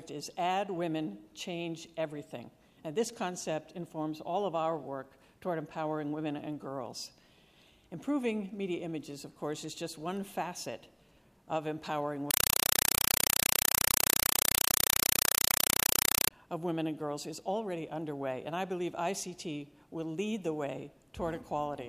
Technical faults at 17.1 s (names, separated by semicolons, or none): none